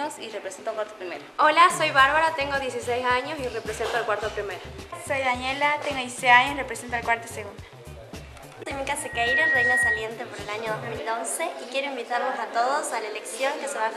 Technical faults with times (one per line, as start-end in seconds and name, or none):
8.99-10.11 loudspeaker feedback squeal